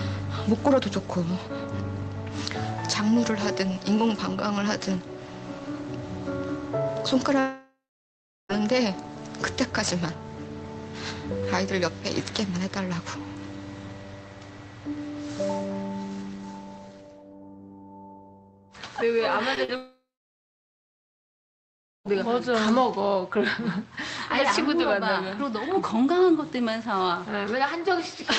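At 7.39 s the audio breaks off until 8.51 s. This is a long network dropout, likely caused by about 1.1 s of audio never arriving. The receiver stretches the last sound into a fading buzz or hiss. After that, roughly 0.74 s of near silence remains. The sound then resumes further on, and the lost stretch is simply gone.

Two short concealed packet losses follow, at 19.55 s and at 19.64 s. About 20 ms and then 40 ms of audio reached the decoder too late. Each gap is patched by continuing the preceding sound and then blending back into the real signal. They come across as a quick smear or wobble, and a brief sound could vanish inside them.

At 19.76 s a second long network dropout starts and runs until 22.13 s. Here about 2.3 s of audio was likely lost in transit. The concealment buzz fades quickly. Roughly 2 s of silence or a low steady noise remains before the audio returns, missing what fell in between. 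Across the clip, the call codec's band limit at 8 kHz takes away the top end.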